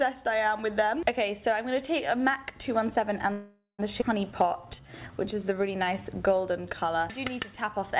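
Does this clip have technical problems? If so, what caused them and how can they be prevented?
Yes, there are three faults, heard through a narrowband call path that carries nothing above 4 kHz, which fits a 64 kbps G.711 A-law codec.

Call audio freeze, 3.32 to 3.81 s: for about half a second the sound stalls. The receiver extends the last fragment into a fading sound that ends in roughly 140 ms of silence, then resumes exactly where it stopped. The likely cause is packets delayed in transit, leaving the jitter buffer empty. Nothing is lost, but the whole stream now plays 466 ms later. Prevention: prioritise call traffic on the network (QoS) and keep a modest jitter buffer reserve so short delivery stalls don't drain it.

Skip ahead, 4.01 to 4.04 s: right after the freeze, playback jumps forward. Roughly a third of a second of audio disappears, bridged by only an 8 ms splice, so the two sides butt together almost directly. 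This is the buffer dumping the backlog that piled up during the stall, or losing it in transit, to cut the extra delay back down. Prevention: drain accumulated delay gradually with time compression instead of discarding a block of queued audio at once.

Jitter buffer slow-down, 4.32 to 6.87 s: for about two and a half seconds the sound runs at 90% speed with unchanged pitch, drawn out. The buffer, running low, repeats single pitch periods and slivers of pauses back to back, inserting 274 ms in total to refill itself. Prevention: stabilise packet arrival and avoid aggressive buffer dumps so the receiver never has to rebuild its reserve this hard.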